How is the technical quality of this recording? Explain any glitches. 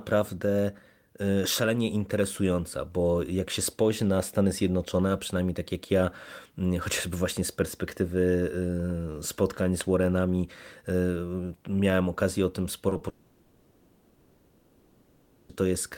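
The recording is disrupted near the end by a run of brief concealed losses followed by a long gap.

Short concealed packet loss: Three consecutive chunks of audio failed to reach the decoder in time, at 12.89 to 12.93 s, 12.93 to 12.97 s and 12.97 to 13.01 s. For each, the receiver synthesised about 20 ms by extending the preceding sound, then blended back into the real signal. Back to back like this, they come across as a short smeared, wobbling patch lasting about a tenth of a second.

Long network dropout: From 13.09 to 15.51 s, about 2.4 s of audio is missing, most likely because nothing arrived over the network for that whole stretch. Instead of going silent, the gap is filled throughout, first with a continuation of the last sound and then with a faint, steady noise. When the real audio returns at 15.51 s, the material from that interval is simply gone.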